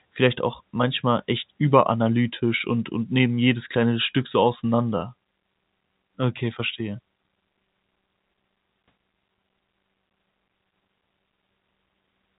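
No technical faults are audible.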